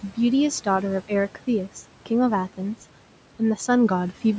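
From start to finish the speech carries noise suppressor artifacts. The suppressor pulls the steady room noise down by about 12 dB in each frame, so the background sinks in the gaps between words and swells back up beneath them. On a spectrogram the noise floor appears patchy and pulses with the speech, with blotchy, flickering specks between utterances. The room noise sits about 19 dB below the speech, and the call microphone processing leaves nothing above 8 kHz.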